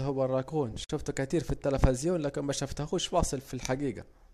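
At 0.84 s the speech drops into about 52 ms of silence with smeared edges before "كتير في التلفزين لكن": a gap at a join of separately encoded pieces, where encoder delay and padding were left untrimmed.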